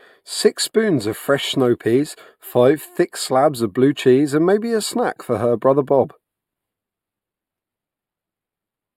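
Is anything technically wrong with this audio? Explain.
Yes. Channel delay causing comb filtering runs throughout the speech. One channel lags the other by only a few samples, well under a tenth of a millisecond, and summing them to mono cancels energy at regularly spaced frequencies, starting around 7 kHz, so it sounds hollow or phasey, with fixed notches.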